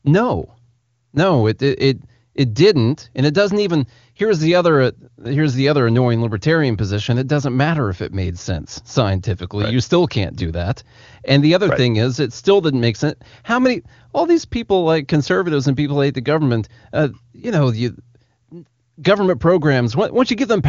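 No faults heard in this speech.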